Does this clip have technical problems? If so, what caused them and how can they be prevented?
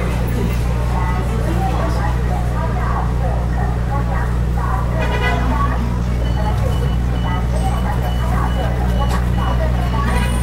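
Yes. From 5.6 s to the end the sound turns rushed at about 1.7 times speed with unchanged pitch. That is a time-stretched section, likely squeezed by software dropping short pieces. Prevent it by editing for length instead of time-compressing.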